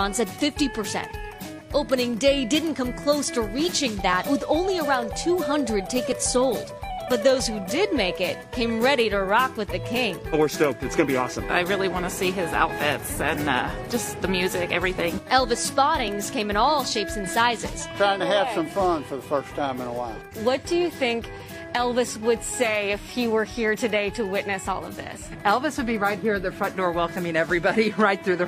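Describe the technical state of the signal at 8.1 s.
A tiny skip, as about 40 ms of sound drops out between 8.11 and 8.15 s. This is an overlap between stream segments: two segments, which fit a 2-second segment length, claim the same time span, so the player trims it, removing audio that was never doubled and leaving the waveform to jump.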